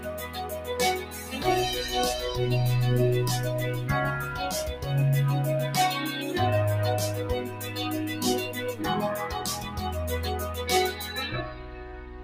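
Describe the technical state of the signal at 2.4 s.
At 2.4 s, as throughout, a speech-tuned noise suppressor applied to music or sounds ducks sustained tones and tails by around 10 dB, unlike compressor pumping, which follows loudness rather than steadiness.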